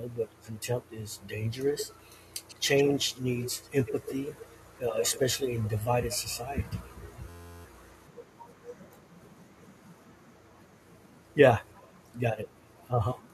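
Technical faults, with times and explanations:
0.07–1.28 s, 1.77–5.21 s, 7.98–8.59 s and 11.69–11.98 s, echo leak: A delayed copy of the speech trails the original. It lags by about 166 ms in the first stretch and about 133 ms in the others. It is strongest from 1.77 to 5.21 s, only about 10 dB below the speech. Elsewhere it sits roughly 30 to 40 dB down. The likely cause is a far-end loudspeaker whose echo canceller let part of the pickup return.
7.29–7.65 s, system hang loop: One 11.6 ms slice of audio repeats exactly, 31 times over. At that length it forms a steady buzz near 86 Hz instead of a stutter. The loop length fits a 512-sample buffer. The system froze while the audio hardware kept replaying its ring buffer. About 0.4 s of real audio is lost.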